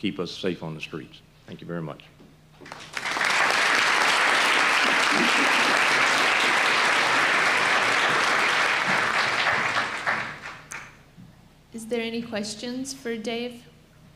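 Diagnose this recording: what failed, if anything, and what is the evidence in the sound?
Nothing stood out on listening that would point to a failure at any stage of the chain.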